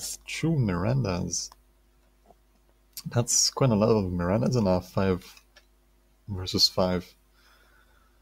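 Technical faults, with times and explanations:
Throughout: noise suppressor applied to music or sounds, a speech-tuned suppressor treats sustained content as noise, so gain swings roughly 20 dB; the waveform envelope visibly pumps.
1.49 to 2.99 s, 5.37 to 6.28 s and 7.1 to 8.22 s: sound cut by the noise suppressor, held material sinks by up to about 12 dB; spectrograms show darkened bands and truncated decay tails.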